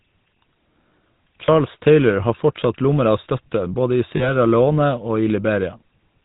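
Throughout the speech there is a plainly audible buzzy, gravelly roughness, and nothing above 4 kHz survives. This is the GSM full-rate codec, which fits a 13 kbps coder: it models the vocal tract and excites it with sparse, regularly spaced pulses.

At 1.46 to 1.49 s and again at 4.16 to 4.31 s, the sound briefly freezes into a rough, metallic ring. These are lost GSM frames, with roughly 20 ms and then 40 ms of missing audio. Each gap is covered by repeating the last good frame's settings.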